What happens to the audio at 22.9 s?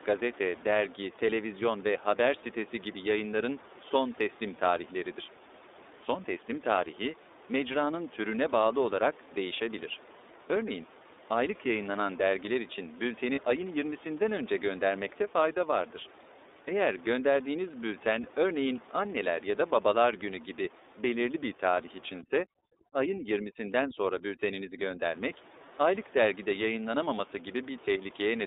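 Overdone noise removal runs from 22.21 to 25.06 s, starting just after "gibi belirli bir tarih". A noise reducer set far too strong cuts frequency bands close to its noise estimate, taking quiet parts of the speech with them. The background drops and breaks up into twinkling specks.

The iLBC codec is also active here, as it is throughout. It codes each 30 ms frame independently, which fits its 13.33 kbps mode, and passes only 300 Hz to 3.7 kHz. The speech sounds narrowband, slightly rough and synthetic.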